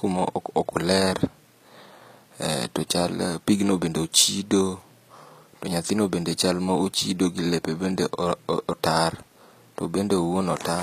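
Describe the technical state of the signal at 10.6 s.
At 10.6 s the speech carries the same coding damage heard across the whole clip, most likely HE-AAC compression at a low bitrate, consistent with about 24 kbps. Only the lower band is coded; the treble is rebuilt by copying lower bands upward under a coarse envelope, so s sounds come out gritty and metallic. A spectrogram shows a hard crossover with blocky, repeated texture above it and harmonics that don't continue across the join.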